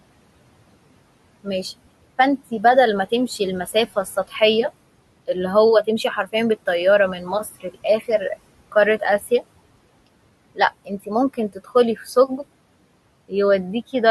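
Noise suppressor artifacts run throughout. The room noise, about 20 dB below the speech, is pulled down by about 21 dB between phrases. Speech cut by the noise suppressor follows at 7.44 to 7.85 s, 10.85 to 11.09 s and 11.34 to 11.71 s. Brief parts drop by about 14 to 17 dB and sound swallowed.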